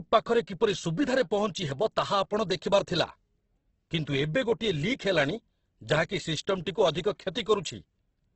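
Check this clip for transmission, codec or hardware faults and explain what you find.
One fault runs through the whole speech clip: likely Opus compression in its CELT mode, at a bitrate around 12 kbps. Tones sound grainy and rough with heavy noise-filled texture, and a spectrogram shows nothing above 8.2 kHz.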